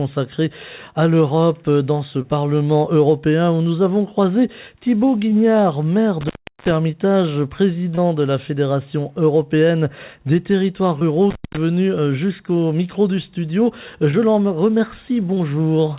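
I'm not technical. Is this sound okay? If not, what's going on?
No. Twice the sound cuts out with a crackle at each edge, leaving faint hiss: at 6.21 to 6.71 s and 11.31 to 11.57 s. That's an intermittent contact, a loose cable or plug briefly opening.

At 7.95 to 7.99 s and 10.99 to 11.03 s there's a tiny smear or wobble. That's short concealed packet loss: a sliver of the call went missing and the receiver patched it by continuing the sound just before it.

The muffled, phone-like tone, with nothing above 4 kHz, comes from the call connection itself.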